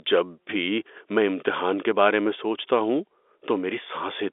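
No technical faults can be heard in this speech clip, which carries the usual narrow telephone band of G.711 coding, roughly 300 Hz to 3.6 kHz.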